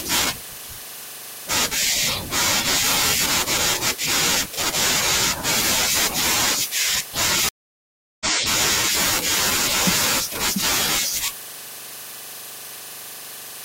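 At 7.49 s the speech cuts to 0.72 s of silence. When it returns at 8.27 s, it has skipped ahead by roughly 0.4 s. This is a stream reconnect: the connection dropped, and the player reconnected and restarted its decoder partway through the stream.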